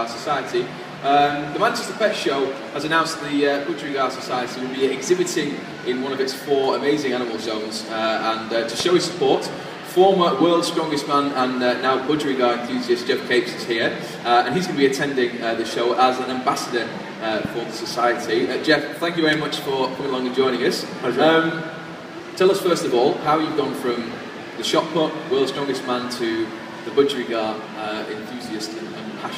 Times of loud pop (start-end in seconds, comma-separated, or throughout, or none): 8.80-8.82, 17.45-17.47